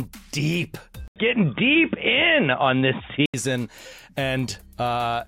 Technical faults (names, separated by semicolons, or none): input switched to a poorer device